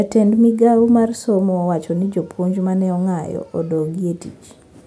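Nothing in this speech recording jumps out as a technical fault; it just runs along without any glitch worth pointing to.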